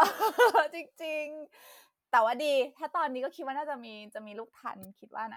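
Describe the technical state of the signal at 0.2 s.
At 0.2 s the speech signal is intact, with no audible technical fault at that moment.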